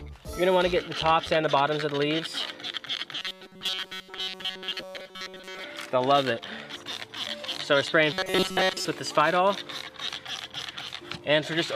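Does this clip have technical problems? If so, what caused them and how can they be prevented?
Yes. Robotic sound from repeated short buffers appears from 3.20 to 5.64 s and again from 8.13 to 8.85 s. Both stretches carry a rigid, metallic buzz at 188 Hz. That fits a fragment of about 5.3 ms being replayed. The first stretch sounds almost entirely repeated, the second mostly so. The likely cause is audio arriving too seldom, so the player repeats its last fragment. Larger buffers and a steadier delivery path prevent this.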